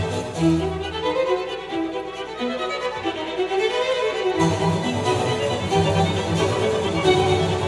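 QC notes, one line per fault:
throughout: resampler restarted on every block. Steady 10 Hz ticking under the music, because each 100 ms block was resampled separately, leaving a small error at every block edge.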